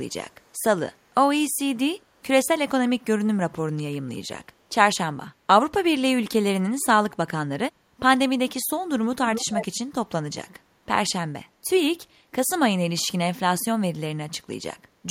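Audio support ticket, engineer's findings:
Echo leak, 0.09–0.14 s and 0.30–0.62 s: delayed copy of the speech about 289 ms behind, very faint, brief scraps. Echo leak, 9.25–9.66 s: same 289 ms lag, echo nearly as loud as the speech. Likely cause: far-end loudspeaker playback reaching its microphone, with that side's echo canceller failing to subtract it before sending it back, worst around 9.3–9.7 s.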